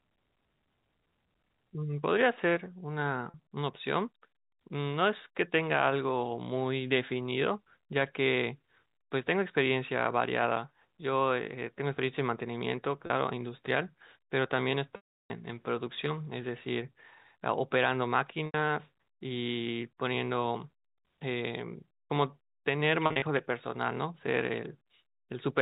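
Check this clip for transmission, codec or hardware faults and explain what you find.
Packet loss with pitch repetition occurs five times in this telephone-band speech, which carries the 4 kHz ceiling of G.711 coding with only faint quantisation noise.

Packet loss with pitch repetition at 3.30 s and 13.06 s (40 ms each, fitting two 20 ms packets), 18.46 s (80 ms), 14.96–15.30 s (340 ms), and 23.06–23.22 s (100 ms scattered across 160 ms, runs up to 40 ms). The receiver loops the last pitch cycle over each gap. The short losses sound like a brief buzzy hold. At 14.96 s the repetition fades to silence before the speech cross-fades back.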